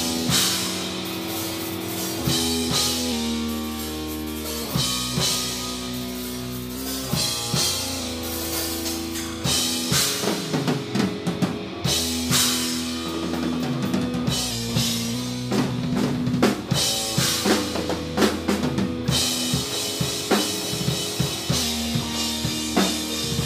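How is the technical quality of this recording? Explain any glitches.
The recording has three short glitches where speed and pitch jump together, each a drift correction step. A clock-matching stage likely changed the playback rate in a single step to rebalance its buffer. From 3.12 to 4.68 s the sound runs 6.21% slow and drops 111 cents, just over a semitone. From 6.77 to 8.00 s it runs 6.21% fast and rises 104 cents. From 21.63 s to the end it drops again by 111 cents. Each time the sound is abruptly detuned and sped up or slowed; the first two times it then snaps back.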